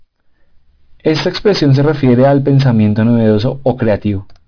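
Aliasing, throughout: content above 5.5 kHz folded back unfiltered, which fits a drop to 11 kHz, leaving gritty, metallic false tones roughly 20 dB below the sound.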